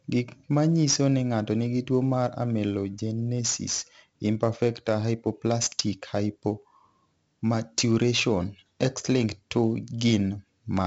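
From start to finish the speech carries 4-bit ADPCM compression, and the damage is heavy. Each sample is coded as a coarse 4-bit step from a predicted value, so the rounding error rides up and down with loudness. It is heard as a gritty hiss that swells on every loud syllable, with roughened consonant attacks. On a spectrogram a broadband noise floor brightens under loud passages, and everything stops at 7.7 kHz, which fits a 16 kHz sample rate at about 64 kbps.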